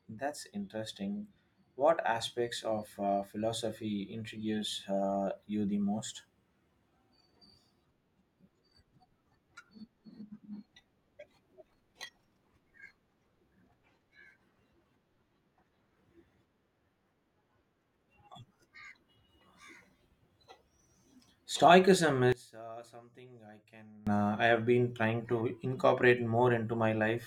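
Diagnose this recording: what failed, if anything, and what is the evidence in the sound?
From 22.32 to 24.07 s, just before "uh I have been", the speech drops by about 24 dB to a faint residue. The likely cause is one channel inverted in the analogue wiring, so summing to mono cancels what both channels share. The waveform envelope shrinks.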